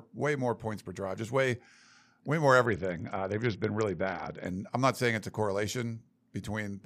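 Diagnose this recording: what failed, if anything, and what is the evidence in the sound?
The codec stage failed: this is a Bluetooth SBC bit pool drop. From 2.66 to 4.46 s the speech turns dull and gritty as the top end falls away and a rough, grainy noise rides under it. When the link got congested, the encoder cut its bit budget hard, to something like 61 kbps. The upper sub-bands were starved and the rest were coarsely quantised. The sound snaps back at 4.46 s once the rate recovers.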